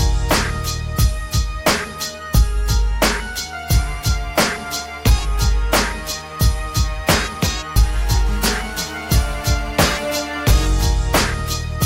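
From 8.56 to 10.17 s there's GSM phone buzz: a harsh, raspy 217 Hz drone, about 19 dB below the audio, holding steady like a nearby phone mid-call.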